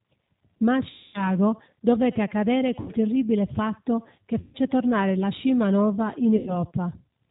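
Throughout, the speech carries G.729 codec damage at 8 kbit/s: nothing above 4 kHz, and a plainly rough, synthetic texture from the low-rate parametric rebuild.

VoIP packet loss concealed by the speech codec occurs at 0.90–1.31 s, 2.80–2.92 s, 4.41–4.58 s and 6.37–6.61 s. The decoder repeats its last pitch and filter at falling gain, producing fading buzzy tones, with weak speech briefly after each gap.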